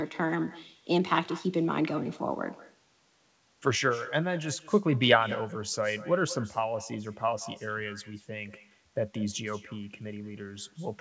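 From start to finish the speech carries an echo with no canceller: a quieter copy, about 19 dB below the talker, returns roughly a fifth of a second later, thin, as the far end's loudspeaker feeds its microphone and nothing removes it. The call path's band-limiting leaves nothing audible above 8 kHz, which fits a wideband codec such as G.722.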